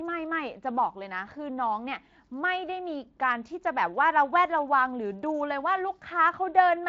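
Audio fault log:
No faults are present in the speech; the signal passes through the Speex encoding path without a technical problem anywhere in the audio.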